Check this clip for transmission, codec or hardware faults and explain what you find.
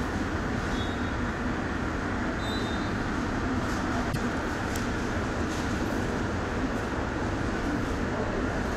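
One codec fault is audible. From 4.09 to 4.16 s, damaged data in a compressed stream makes the decoder misread the frames there and lose sync, producing a brief glitch.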